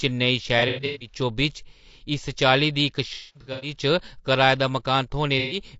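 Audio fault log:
throughout, low-delay AAC compression: the whole speech clip has a rough, grainy texture, with noise filling the gaps between harmonics and a thin, slightly synthetic top end. That's likely a low-delay codec like AAC-ELD running at a bitrate that fits around 32 kbps. Its short frames can't resolve the pitch harmonics cleanly, and at that bitrate the bits run out, so the fine spectral detail gets smeared into noise.
0.59–1.14 s, 3.14–3.74 s and 5.39–5.59 s, AAC frame loss with concealment: three patches where the sound goes smeared, noisy and a bit phasey. The decoder is rebuilding lost frames from the last good spectrum. The first patch loses about 270 ms spread over 420 ms, with the longest gap around a tenth of a second. The second loses about 360 ms over 480 ms, with one gap of roughly a fifth of a second. The last loses about 120 ms.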